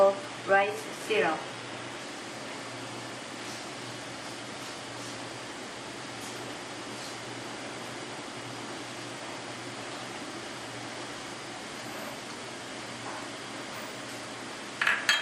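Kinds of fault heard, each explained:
Adaptive stream starting at a low bitrate: for the first 2.0 s the treble is thin and synthetic, with nothing above 12.3 kHz, which suggests HE-AAC near 16 kbit/s. Quality then jumps without any gap, unlike a dropout or a fixed low-pass that never lifts.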